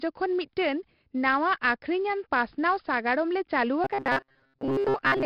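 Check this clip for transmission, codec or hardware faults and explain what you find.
Two faults are present: 4-bit ADPCM compression across the whole speech recording, and a robotic buzz from repeated short buffers near the end.

The 4-bit ADPCM compression runs from start to finish and the damage is heavy. Each sample is coded as a coarse 4-bit step from a predicted value, so the quantisation error rides on the signal as a gritty hiss that swells with every loud syllable and roughens sharp onsets, where the adaptive step lags behind. The density points to a data rate in the region of 44 kbps. Unlike plain white noise or tape hiss, this grit vanishes in pauses and tracks the level of the speech.

The robotic sound from repeated short buffers starts at 3.84 s and lasts to 5.26 s. The voice collapses into a rigid metallic drone pitched at 134 Hz, still loosely following the speech contour. 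The likely cause is audio arriving too late, with the playback filling gaps by looping a chunk of about 7.5 ms, the period matching that 134 Hz buzz, while most of the real audio in that stretch is skipped. Dropouts leave silence and jitter smears timing; here a fixed, unnatural pitch is imposed instead.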